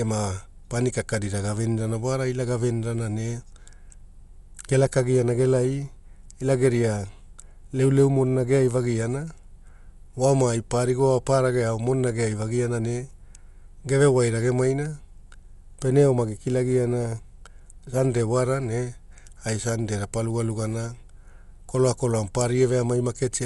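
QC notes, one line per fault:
Throughout: Dolby Digital compression, likely from a starved encode that fits a bitrate near 64 kbps. Nothing survives above 11.4 kHz, and many frequency lines get no mantissa bits, so decoder dither fills them. The speech sounds dull, with plainly audible rough, fluttering noise.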